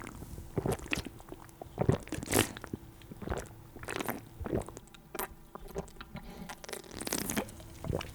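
From 4.80 to 6.93 s, channel delay causes comb filtering. One channel runs around 5 ms late, and summing to mono cancels shared content near 100 Hz and at regular steps above it. The sound turns hollow and phasey, and a spectrogram shows evenly spaced dark horizontal notch bands.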